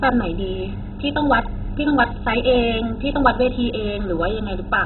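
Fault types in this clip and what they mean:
MP2 compression: the speech sounds dull, with nothing above about 4.1 kHz, and a heavy gurgling, granular distortion runs throughout. This is likely Layer II coding with too few bits, which fits roughly 16 kbps: upper sub-bands switched off, remaining bands coarsely quantised.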